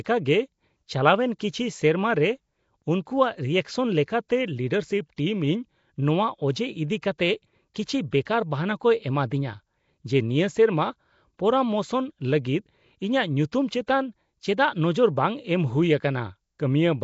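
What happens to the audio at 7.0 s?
At 7.02 s there is a short pre-echo. The codec spreads its noise evenly over a block, so about 10 ms of hiss leaks ahead of a sharp attack and blurs it. Underneath, the speech sounds rough and hissy, with nothing above 7.7 kHz. That points to likely Nellymoser compression, fitting a low bitrate of 32 kbps.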